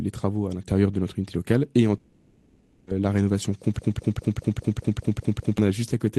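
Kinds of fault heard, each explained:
Long network dropout: Just after "notre unité locale et", from 1.97 to 2.89 s, the speech gives way to a fading buzz that fills the whole gap. The missing audio likely never arrived. A waveform shows a decaying smear, and a spectrogram shows blurred, fading bands before speech resumes.
Broken-record loop: From 3.79 to 5.58 s, a 0.2 s fragment repeats exactly, back to back, nine times, which likely points to a stalled stream resending its last piece. The waveform shows identical blocks tiled evenly, and the spectrogram shows the same pattern stamped at regular intervals.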